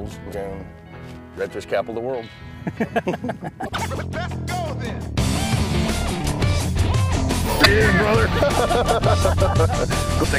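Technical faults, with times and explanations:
0.30–0.34, 3.65–3.69, 7.62–7.66 and 10.20–10.25 s: damaged data in a compressed stream. Each time, corrupted bytes make the decoder misread or reject frames and lose sync until it finds the next frame header. Each glitch lasts about 40 to 50 ms and appears as a narrow vertical break in the spectrogram and waveform.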